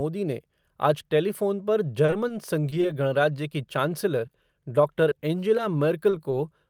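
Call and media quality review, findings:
Repeated packet loss (robotic sound), 2.05–2.94 s: network dropping or delaying packets back to back, five gaps up to 30 ms, jitter buffer concealing each by extending the previous speech, 13% of the span. The result is choppy speech with missing pieces.

Short concealed packet loss, 4.27–4.31 s: one 20 ms hole reached the decoder too late, patched by extrapolating the last pitch or noise and crossfading back. A brief smear or wobble in the speech.

Scattered short gaps, 5.09–6.34 s: isolated late or lost packets, about five, each around 20 ms at most, concealed by continuing the preceding audio, roughly 7% of the stretch. Speech stays clear but carries small hiccups and ticks.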